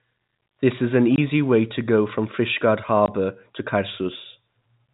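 At 1.16 to 1.18 s and again at 3.06 to 3.08 s there's packet loss filled with silence: one 20 ms packet dropped each time, leaving a hard-edged gap in the speech.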